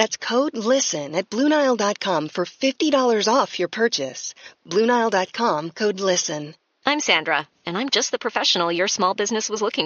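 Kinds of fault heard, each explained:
No kinds of fault are heard in this speech clip.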